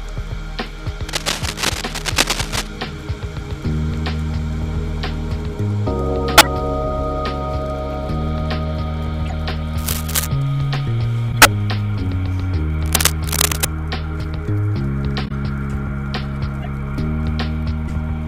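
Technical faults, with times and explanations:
1.09–2.67 s, 9.77–10.26 s, 12.86–13.66 s: cable scratch noise. Dense, uneven scratching sits over the sound at roughly its own level. A worn, moving contact is the likely cause.
6.38–6.46 s, 9.26–9.33 s, 11.32–11.46 s, 15.25–15.32 s, 16.62–16.67 s, 17.88–17.90 s: corrupt frame decoded. Each is a short chirp or burst across a few damaged frames. Bursts at 6.38 s and 11.32 s are the loudest.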